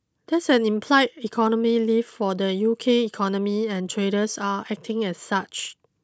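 No technical faults can be heard anywhere in the speech.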